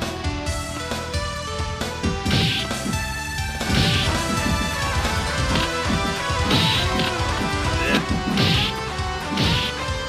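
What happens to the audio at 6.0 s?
At 6.0 s the sound is stacked on top of itself: a second, equally loud copy runs about one and a half seconds behind the first, with no decay or room colour to set it apart. This doubled audio track starts abruptly at 3.67 s and cuts off abruptly at 7.97 s. The likely cause is the same signal being picked up a second time through a slower path, or an edit leaving two copies out of step.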